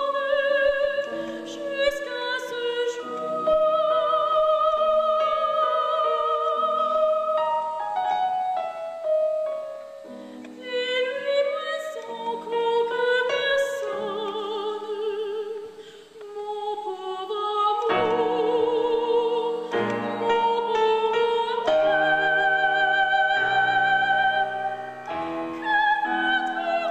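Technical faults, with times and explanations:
Nothing here jumps out as a technical problem; it all sounds the way it should from beginning to end.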